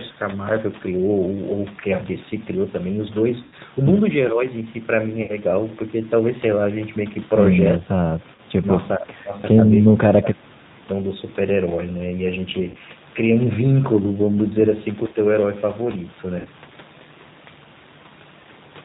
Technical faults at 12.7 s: G.729 codec; VoIP packet loss concealed by the speech codec

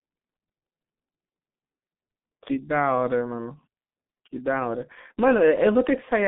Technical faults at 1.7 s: G.723.1 codec

